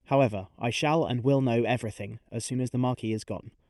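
From the start, the speech has a hollow, phasey colour from channel delay (comb filtering). One channel arrives roughly 0.4 ms behind the other, and when the two are folded to mono, shared content cancels at evenly spaced frequencies, with the first notch near 1.5 kHz.

Also throughout, there is clock drift between sender and receiver. The sender's clock runs roughly 4 percent fast, so the receiver's jitter buffer keeps overfilling. The receiver must keep discarding material to hold its latency, and the result is small timing hiccups at irregular spacing.

From 0.13 s to 3.57 s, those repeated timing corrections take the form of a string of unevenly spaced cuts, all in the same direction, trimming short pieces out of the speech. The net playback rate works out to 104 percent, which gives a slightly hurried, uneven tempo with faint stumbles.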